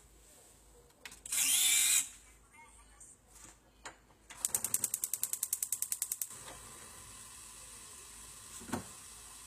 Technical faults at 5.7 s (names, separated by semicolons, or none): HE-AAC compression